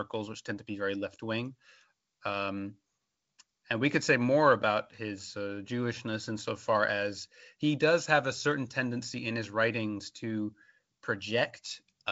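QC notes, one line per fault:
No faults heard anywhere in this speech recording.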